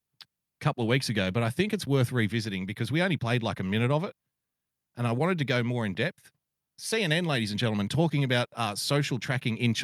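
No technical faults can be heard at any point in the recording, and the signal stays steady and intact the whole way.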